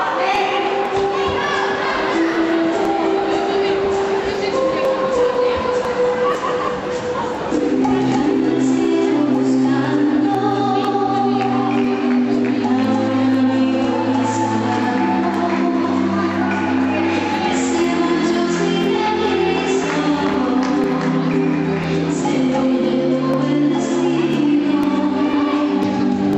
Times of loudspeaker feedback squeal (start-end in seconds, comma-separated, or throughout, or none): none